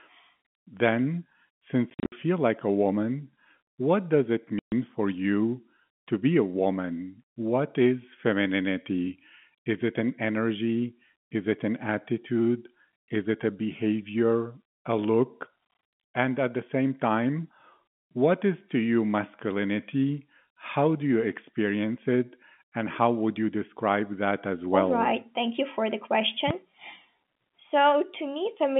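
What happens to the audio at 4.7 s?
Packet loss filled with silence cuts the speech from 4.59 to 4.72 s, after "woman what does it". Missing packets leave a 130 ms hole with hard edges.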